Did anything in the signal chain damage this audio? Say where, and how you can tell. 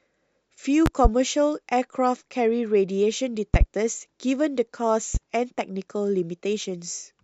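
Yes. Loud pops enter at the analogue stage: paired pops at 0.86–1.08 s and 3.54–3.64 s, and one at 5.15–5.18 s, about 20, 15 and 10 dB above the speech. Each shows as a waveform spike and a full-height spectrogram stripe over continuing speech, likely voltage steps from a plug or static.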